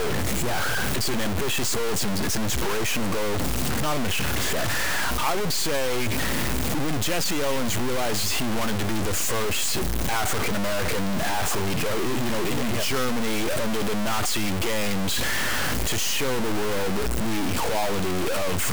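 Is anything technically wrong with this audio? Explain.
Yes. Throughout the speech, a harsh grainy distortion tracks every syllable and quiet moments sputter or drop out, likely low bit depth without dither, with truncation to about 3 bits leaving error about 5 dB louder than the voice.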